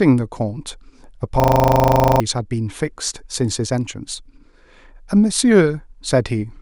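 From 1.4 to 2.2 s, a system hang loop takes over. The system froze while the hardware kept replaying one 40 ms piece of buffered sound, about twenty times over. It forms a rough 25 Hz buzz, and most of a second of audio is lost.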